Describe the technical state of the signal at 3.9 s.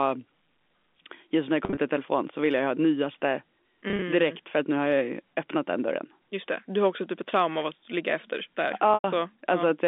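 Packet loss with pitch repetition affects the signal from 3.88 to 4.02 s. Around 80 ms of audio goes missing in scattered gaps across that 140 ms stretch, the longest lasting 30 ms, which suggests small packets dropped in clusters. Each gap is bridged by repeating the last pitch period, and since no gap is long enough to fade out fully, the audio briefly takes on a held, buzzy quality. The surrounding telephone-band sound, about 250 Hz to 3.6 kHz, continues through it.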